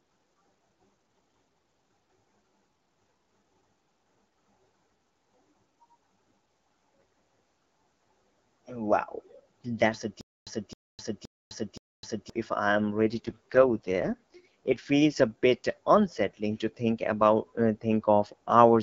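An AMR rate drop runs from 6.47 to 8.61 s. The speech loses its fairly clean wideband texture and turns rough and buzzy, with a synthetic edge, while the bandwidth stays the same and nothing drops out. The network has pushed the codec down to a lower mode to protect the bits on a weak link, which fits a step from 12.65 to 6.6 kbit/s. Clarity returns when the rate climbs back.

A stutter with silent gaps follows from 10.21 to 12.30 s. A fragment of about 0.26 s plays four times, each time followed by about 0.26 s of dead digital silence, so the burst repeats every 0.52 s. The player likely stalled and replayed its last buffered fragment at each retry before running empty. Whatever audio belonged in that stretch never arrives.

The AMR rate drop returns from 13.04 to 14.86 s with the same raspy, synthetic roughness. As before, the band holds steady and there is no gap. The sound again points to a fall from 12.65 to 6.6 kbit/s, with the HD Voice clarity coming back once the higher rate resumes.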